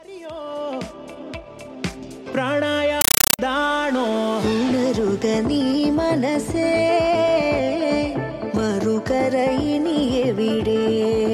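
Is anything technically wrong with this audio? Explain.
Yes. From 3.01 to 3.39 s there is a compressed stream played as audio. Undecoded AC-3 data, consistent with a 384 kbps stream, is read as ordinary samples, so 8 ms noise bursts and silent padding repeat 31.25 times a second, heard as loud, chattering static.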